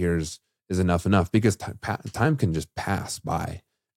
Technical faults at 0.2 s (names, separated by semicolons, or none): none